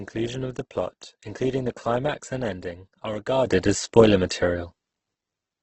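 Opus compression runs throughout the speech: nothing above 8.1 kHz, with heavy grainy, rough texture, likely from music-mode encoding at a low rate fitting roughly 12 kbps. A sudden gain jump at 3.47 s, just after "climax and ending are", lifts speech and background together by about 12 dB to the end, likely an unramped digital gain change.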